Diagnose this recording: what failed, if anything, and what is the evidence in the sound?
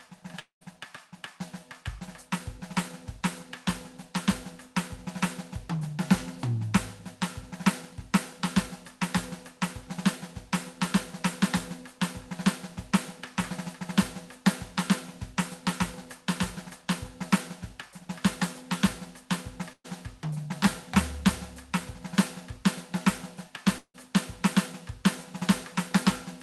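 The music drops out twice, at 0.39 to 0.63 s and at 23.78 to 23.96 s. Each time the last sound is stretched into a fading buzz or hiss, then goes quiet for roughly 130 ms and 70 ms before resuming past a skipped stretch. That points to a likely long network dropout.

At 19.73 to 19.86 s there's a shorter burst of packet loss on the network side, with about 120 ms of the music gone. The receiver holds the last sound and fades it out, leaves around 60 ms of near-silence, then jumps ahead. The call path limits the top end to roughly 12 kHz.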